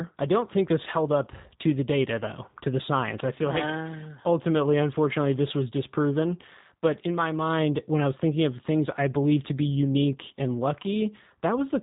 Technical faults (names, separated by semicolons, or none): G.729 codec